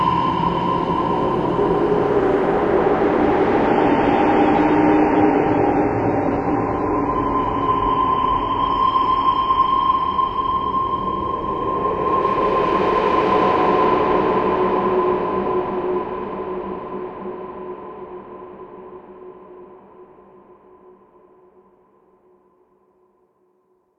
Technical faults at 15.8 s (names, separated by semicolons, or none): none